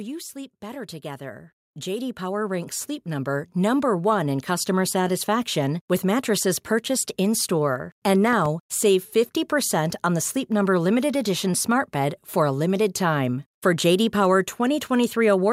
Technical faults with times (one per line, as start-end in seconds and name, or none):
0.33-4.78 automatic gain rising
8.33-8.48 loud pop